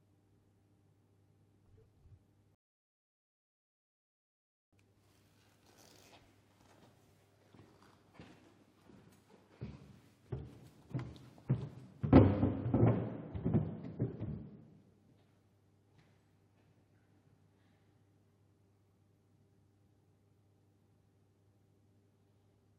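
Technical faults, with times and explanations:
2.55–4.73 s, rebuffering stall: the sound halts into silence for about 2.18 s and resumes exactly where it stopped, so nothing is skipped, unlike a dropout.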